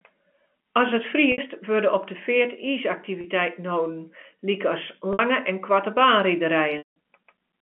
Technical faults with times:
1.32-1.38 packet loss with pitch repetition
3.21-3.24 packet loss with pitch repetition
5.13-5.19 packet loss with pitch repetition
6.78-6.94 packet loss with pitch repetition

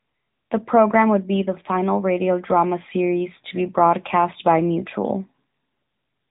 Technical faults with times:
0.00-6.31 AMR narrowband mobile codec

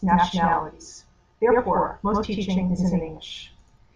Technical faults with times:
0.00-3.95 channel delay (doubling)

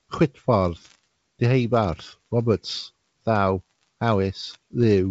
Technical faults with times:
none

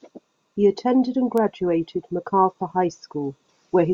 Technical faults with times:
1.38 bit error spike

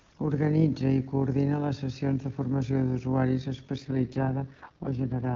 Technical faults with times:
0.00-5.36 overlap-add ripple
3.79-5.36 AMR rate drop

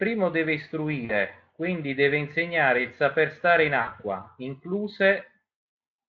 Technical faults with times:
1.05-1.14 VoIP packet loss concealed by the speech codec
3.81-3.90 VoIP packet loss concealed by the speech codec

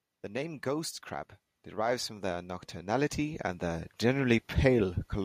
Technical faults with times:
0.22-4.44 automatic gain rising

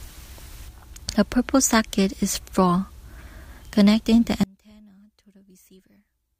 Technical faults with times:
4.43-6.39 one channel inverted

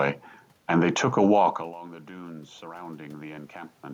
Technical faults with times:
1.77-3.94 automatic gain rising

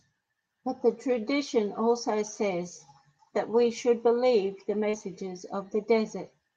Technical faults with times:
1.09-1.15 lost packet rebuilt from error correction
4.89-4.95 short concealed packet loss
4.93-4.95 lost packet rebuilt from error correction

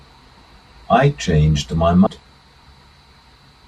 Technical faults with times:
2.06 compressed frames skipped

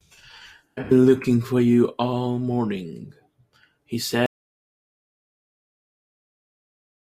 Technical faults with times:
4.26-7.20 audio dropout to silence

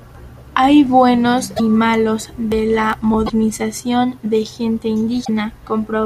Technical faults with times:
1.56-1.60 broken MP3 bit reservoir
3.25-3.30 broken MP3 bit reservoir
5.24-5.29 broken MP3 bit reservoir

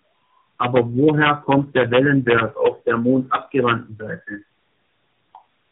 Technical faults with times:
0.00-5.72 tandem speech coding

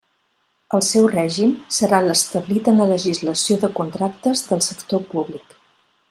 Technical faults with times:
none

